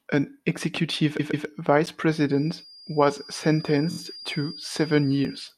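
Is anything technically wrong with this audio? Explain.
Yes, three kinds of fault are audible.

Repeated frames: just after "an executive", from 1.19 to 1.47 s, a 139 ms stretch plays twice more, adding about 0.28 s. At 3.90 to 3.97 s a 23 ms slice, which fits a single frame, repeats three more times. Re-sent compressed frames cause a stutter. On a waveform the identical blocks appear side by side.

Block of digital silence: at 1.86 s, still after "an executive", the audio cuts out for 10 ms, probably because a buffer wasn't filled in time. It is heard as a sharp tick. The waveform shows a flat line with abrupt edges, and the spectrogram shows a thin vertical gap.

Feedback whistle: from 2.22 s to the end, a thin steady tone at 4.8 kHz sits roughly 20 dB below the speech, slowly swelling and fading in level. It is likely a loudspeaker-to-microphone loop held just short of runaway. On a spectrogram it is a persistent horizontal line at 4.8 kHz.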